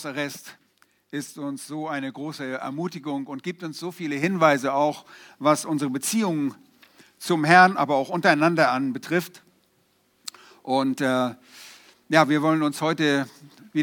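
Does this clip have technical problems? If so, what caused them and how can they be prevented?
Yes. At 4.24 s the level steps up about 6 dB and stays there, background noise included: a sudden gain jump, likely an unramped digital gain change. Applying gain changes with a short ramp prevents it.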